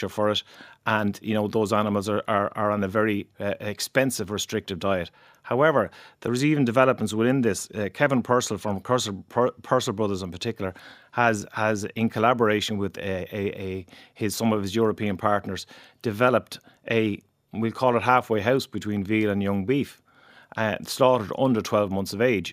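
The speech contains no audible technical faults.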